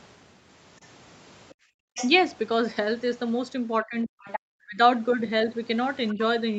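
Other side's voice leaking through first appears at 0.82 s and 1.49 s as brief, very faint scraps beneath the speech, each lasting about 50 ms. The likely cause is that the loudspeaker's playback reached the microphone and the echo canceller did not fully remove it.

Background gated by the echo canceller follows from 1.54 to 1.94 s. The room sound drops by as much as about 40 dB for roughly 400 ms, because the canceller clamped the microphone down hard while the loudspeaker was playing. The background returns once the canceller releases.

The leak recurs from 1.94 to 2.09 s. It is much louder this time, only a little below the talker.

Speech suppressed in double talk runs from 3.83 to 4.81 s. With both sides talking at once, the canceller likely could not tell the talker apart from the echo and turned everything down. Over about half a second in total, the voice sinks by up to around 40 dB. 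At 4.23 to 4.4 s, the far-end voice leaks through nearly as loud as the speech.

A faint leak occurs at 6.08 to 6.14 s. It is followed at 6.14 to 6.19 s by a short double-talk dip of about 10 dB.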